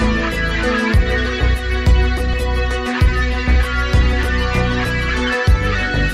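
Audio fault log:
2.33 s, skip ahead: playback suddenly jumps forward, with roughly 400 ms of audio simply gone and the two sides butted together with no gap. That's what you get when a chunk gets dropped while later audio's already queued, so the timeline lurches ahead.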